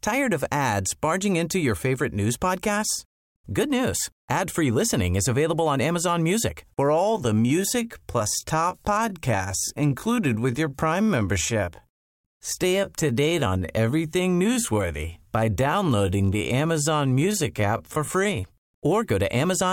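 At 6.85 s the speech slows abruptly and stays slow until 18.43 s. This is a time-stretched section, running at about 0.68 times the original pace. The pitch does not drop with the tempo. Software likely lengthened this stretch to fill a set duration, repeating short slices of audio to keep the pitch steady. Syllables drag. Normal pace returns at 18.43 s.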